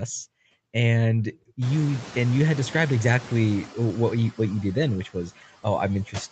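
A noise suppressor runs across the whole speech clip, cutting steady noise by about 13 dB frame by frame, so the residue sinks between phrases and swells under them.

From 1.61 s to 3.68 s, the noise suppressor is catching up. The room noise jumps by about 24 dB near 1.5 s, and the suppressor's estimate lags, removing only about 4 dB at first. The noise pushes through, then settles over roughly two seconds as the estimate adapts.

At 3.90 s, a small jump forward in the sound is likely a dropped buffer (overrun), in which a piece of about ten milliseconds was overwritten before being read and the two sides were spliced together directly.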